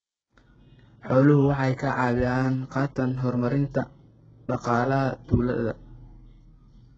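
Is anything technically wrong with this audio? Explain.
Yes. Throughout the speech there is heavy damage from what is likely HE-AAC compression, at a rate that fits about 8 kbps. Nothing reaches above 7.9 kHz. The upper band is rebuilt from copied lower bands, so the treble does not match. Sibilants sound gritty, metallic and lispy.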